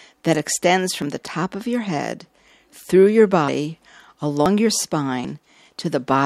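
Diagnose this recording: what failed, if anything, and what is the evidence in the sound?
Abrupt jumps ahead in the sound occur at 1.02, 3.48, 4.46 and 5.25 s, each skipping roughly 50 to 150 ms. The likely cause is a dropped buffer (overrun) at the driver stage. Unlike a dropout, no silent gap is heard; the two sides butt together.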